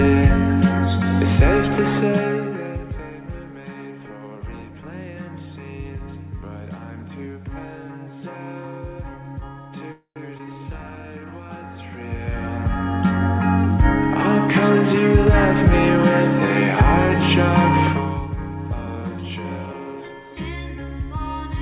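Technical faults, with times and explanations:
9.92–10.18 s, call audio freeze: the sound stalls for about 0.24 s. The last sound trails off into a fading buzz or hiss, then about 0.11 s of silence, and resumes exactly where it stopped. The likely cause is delayed packets emptying the jitter buffer. Unlike a skip, nothing is lost.
10.38–10.41 s, skip ahead: playback jumps forward, dropping roughly 70 ms of audio behind only a 13 ms join. The two sides butt together almost directly. This is the opposite of the freeze just before it: no pause is inserted, but material is missing.
10.74–11.09 s, jitter buffer slow-down: the receiver repeats single pitch periods to add 75 ms, so this stretch plays at 81% speed. It sounds drawn out, possibly with a faint warble. Because pitch stays put, this is time-stretching rather than a slowed playback rate.
11.81–13.25 s, zipper noise: the level changes by roughly 20 dB in unsmoothed 1 dB steps, about 30 per second. 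Each step leaves a small click, giving a ticking, zipping texture over the sound.
18.79–20.10 s, jitter buffer speed-up: the buffer sheds surplus delay by cutting short pitch-period pieces, roughly 200 ms in total. The audio runs at 116% speed and sounds hurried. The pitch is unchanged, which separates this from a sped-up recording and mirrors the earlier slow-down.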